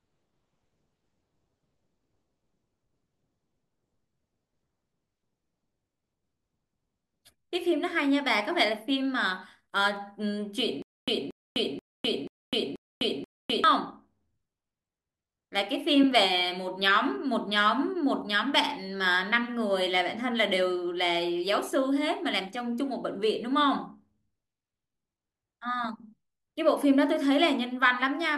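From 10.82 to 13.64 s, a short burst of speech about 230 ms long repeats six times, each followed by roughly 254 ms of dead digital silence, a steady 484 ms cycle. This stutter with silent gaps likely comes from a stalled stream replaying its last fragment, losing the audio in between.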